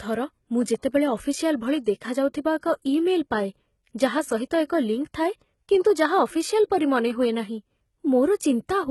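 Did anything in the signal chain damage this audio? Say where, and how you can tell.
Yes. Throughout the speech, s sounds turn gritty and lispy, and the bright treble sounds metallic, unmatched to the harmonics below. That points to the codec stage, likely HE-AAC compression near 16 kbps, faking the top band by copying lower bands upward.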